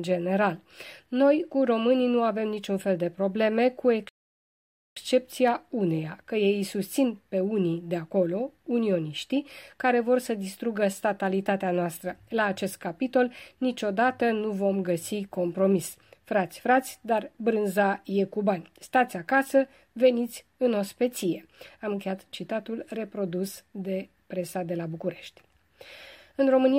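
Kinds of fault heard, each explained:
Rebuffering stall: at 4.09 s the player simply runs out of downloaded audio, so the sound drops to silence for about 0.88 s, then picks up at 4.97 s exactly where it left off. Nothing's skipped; the clip just gets that much longer.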